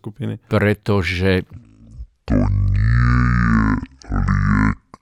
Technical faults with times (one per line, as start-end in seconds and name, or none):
1.52-5.02 section at the wrong speed